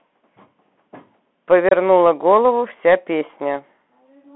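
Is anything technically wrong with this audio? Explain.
Yes, two faults are audible in this speech clip.

Throughout, the sound has the Bluetooth CVSD headset codec's character, consistent with a 64 kbit/s link. Each bit only steps the waveform up or down, so loud high-frequency sounds outrun the step and s sounds turn scratchy over a granular hiss. A spectrogram shows energy confined to about 200 Hz to 3.4 kHz, empty above.

At 1.69 to 1.72 s there is unconcealed Bluetooth headset packet loss. About 26 ms of audio, several packets, never arrived and were replaced by silence or an idle pattern, so the speech drops out with hard edges. The waveform shows a flat gap with abrupt cuts, and the spectrogram shows a blank vertical stripe.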